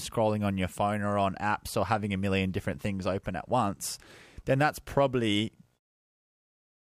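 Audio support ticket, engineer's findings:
No fault found; speech ends on smooth fade-out.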